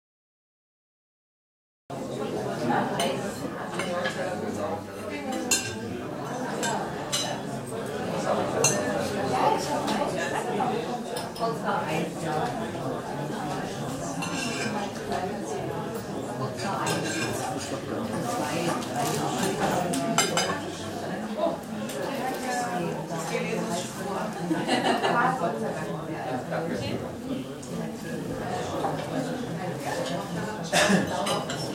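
The capture began late: recording or streaming did not pick up until a sound was already under way, giving a cut-off start. The first 1.9 s are digital silence, and at 1.9 s the audio appears abruptly in the middle of a sound. There is no natural attack and no fade-in, so the entry lands as a sudden jump from nothing rather than the beginning of an event.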